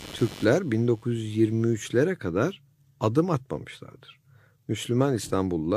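A speech recording with computer activity noise over its first two seconds, from 0.0 to 2.0 s, ending just before "kadar adım atmamışlardır". The noise is a pulsing buzz repeating at around 100 Hz, sitting roughly 20 dB below the speech. It follows changing load in the host machine, not anything in the speech. Shifts in processor, graphics or mouse activity disturb the ground shared with the audio circuitry and inject interference into the signal.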